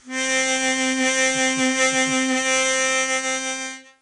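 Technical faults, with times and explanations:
Throughout, 4-bit ADPCM compression. Each sample is stored as a coarse 4-bit step from a prediction, so a gritty hiss follows every loud passage of the music. Nothing sounds above 10.7 kHz, which fits a low sample rate and about 88 kbps.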